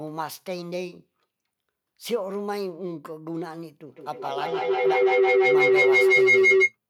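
Feedback howl from 3.87 to 6.77 s: a microphone-to-loudspeaker loop gains level each pass, drawing a bright spectrogram band near 400 Hz that pulses roughly every 150 ms and peaks about 13 dB above the speech.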